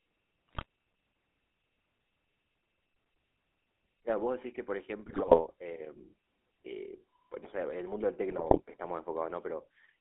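Throughout, the speech carries GSM full-rate codec damage, consistent with the 13 kbps coder: a telephone band of roughly 300 Hz to 3.5 kHz and a plainly audible buzzy, gravelly roughness, because the excitation is rebuilt from sparse, regularly spaced pulses.

GSM bit errors then hit at 0.48 to 0.65 s, 5.04 to 5.46 s and 8.29 to 8.62 s. Corrupted filter, pitch and gain parameters reach the decoder, so those frames come out as squawks, pops and gargling with abrupt level jumps.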